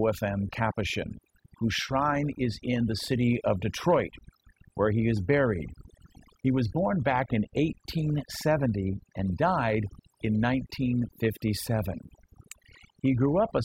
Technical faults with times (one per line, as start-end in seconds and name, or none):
0.00-13.64 overdone noise removal